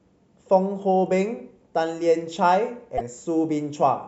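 At 2.97 to 3.01 s the speech is broken by a garbled fragment about 40 ms long, after which it resumes slightly further along. The likely cause is a broken MP3 bit reservoir: after frames were cut, the next frame reached back for borrowed data and decoded another frame's bytes. Unlike a simple dropout, the disturbance spans under two frames of roughly 26 ms and skips content rather than pausing it.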